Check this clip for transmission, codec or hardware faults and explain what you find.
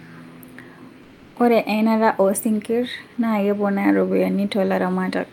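One fault is audible. From 1.03 to 1.35 s the background gives way to comfort noise: about 320 ms of steady, featureless hiss, about 3 dB quieter, likely from discontinuous transmission such as Opus DTX.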